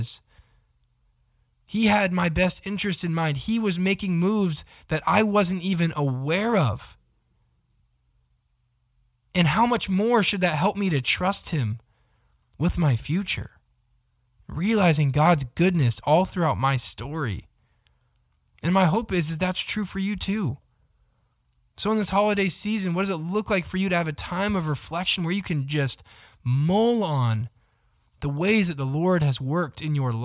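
No technical faults can be heard anywhere in this recording.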